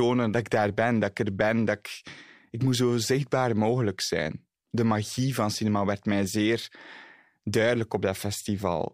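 Nothing in this speech recording points to a technical fault at any moment, and the signal holds steady throughout.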